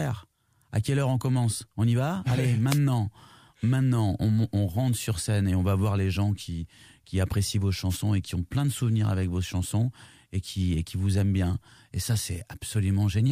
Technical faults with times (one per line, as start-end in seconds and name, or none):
2.69-2.79 wireless microphone noise hit
7.89-7.98 wireless microphone noise hit